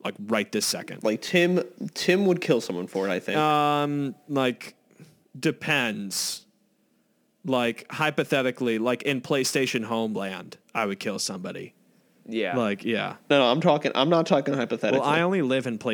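From the start to 11.16 s, the speech carries crude rate conversion. Samples were repeated rather than filtered, which fits a 44.1 kHz to 48 kHz change. The error lies roughly 25 dB below the signal, heard as gritty, inharmonic fizz tracking loud and bright sounds.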